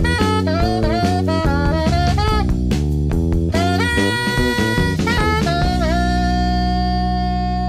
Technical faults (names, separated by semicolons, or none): none